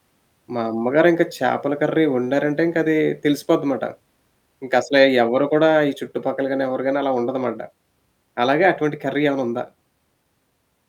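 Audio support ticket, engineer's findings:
No audible faults found on listening back through the speech recording; nothing to escalate from the audio path.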